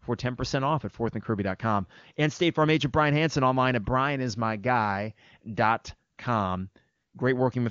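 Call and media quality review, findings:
AMR comfort noise at 6.13–6.17 s and 6.95–7.13 s: real background drops out, replaced by smooth steady synthetic hiss for about 40 ms, then about 180 ms. Sender flagged silence, stopped speech frames; receiver filled gaps from a coarse level/spectrum description. Wideband codec underneath sounds clean, 23.85 kbit/s.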